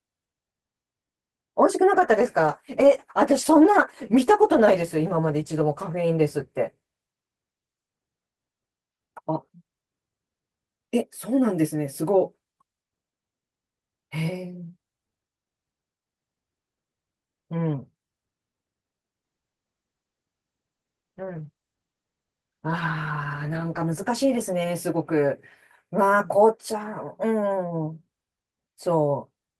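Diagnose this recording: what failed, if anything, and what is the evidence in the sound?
Call bitrate drop, 1.94–7.25 s and 19.25–25.29 s: falling bandwidth estimates pushed the codec to coarse coding, making the speech muffled and rough, consistent with roughly 32 to 13–14 kbps.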